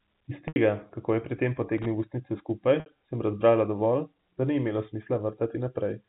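At 0.48 s, just before "kako je pri tem", the sound holds on a slightly buzzy, repeated note for about 80 ms. This is packet loss with pitch repetition: the receiver loops the last pitch period to bridge a gap that fits roughly four lost packets. At 1.78 s, after "kako je pri tem", an 80 ms burst of irregular scratching is loose connector crackle, a worn contact rapidly making and breaking the line. The same held buzz returns at 2.80 s for about 60 ms, between "ustnice skupaj" and "sem razbrala dovolj da", as a second, shorter packet loss bridged by pitch repetition, all heard through the narrow, sub-4 kHz band of the G.711 telephone coding.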